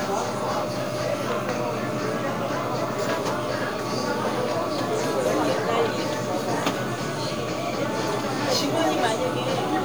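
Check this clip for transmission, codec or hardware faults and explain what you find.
One fault is audible. Low bit depth without dither runs throughout: grainy distortion tracks the sound, and quiet parts sputter or vanish, likely from truncation to about 7 bits, with error roughly 25 dB below the signal.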